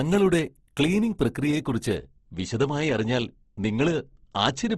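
Throughout, the speech has a grainy, rough texture with plainly audible codec damage, and nothing comes through above 12.1 kHz. That's likely Opus compression in its music mode at a low rate, around 16 kbps, filling starved bands with noise rather than leaving holes.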